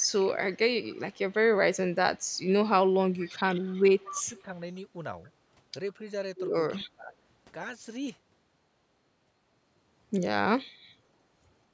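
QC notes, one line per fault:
0.00–1.34 s, 1.93–2.46 s, 2.86–3.31 s, 3.62–4.43 s: echo leak. A loudspeaker-side echo canceller likely let residual pickup through. A copy of the speech returns 240 ms late, faint in the first three stretches (barely audible near 2 s) and strongest in the last, about 15 dB below the speech.
4.06–4.52 s, 6.76–7.14 s: speech suppressed in double talk. With both sides talking at once, the echo canceller likely couldn't separate talker from loudspeaker echo and attenuated both. The speech dips for roughly 0.4 s each time, by about 15 dB, then a deeper cut of about 30 dB.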